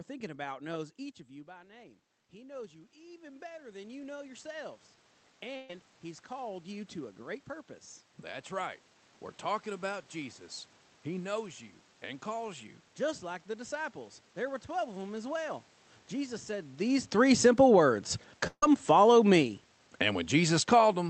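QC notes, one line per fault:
1.28–8.53 s, automatic gain rising: just after "about knows each of" the talker drops back by about 18 dB and the gain control slowly climbs about 16 dB to compensate, so voice and room noise swell together over several seconds rather than jumping.
5.56 s and 18.47 s, burst of packet loss: about 130 ms and 150 ms of audio go missing. The receiver stretches the last sound into a decaying buzz or hiss, and the second gap ends in about 60 ms of silence before speech resumes further on.
17.31–20.95 s, automatic gain falling: after "said these" the level arrives loud, and the gain control pulls back about 6 dB over roughly three and a half seconds, so voice and background sink together. The call codec's top end stops near 8 kHz.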